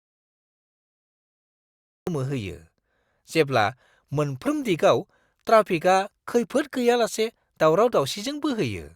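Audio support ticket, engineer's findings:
Audio dropout to silence, 0.00–2.07 s, already in progress at clip start. Speech enters abruptly at 2.07 s, no room tone before it. Likely cause: input lost upstream (device disconnect, failed link or mute) while the recorder kept writing silence. Waveform: flat line, hard edge at 2.07 s. Spectrogram: dark, no room tone, until speech energy appears across the band at once.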